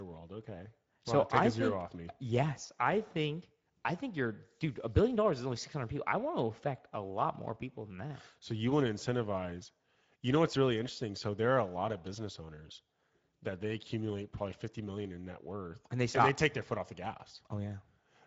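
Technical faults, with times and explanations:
Throughout: Speex codec. The speech sounds noisy and hoarse, pointing to a middle setting near 17 kbps. Nothing sounds above 7.7 kHz. Highs are noise-like fill.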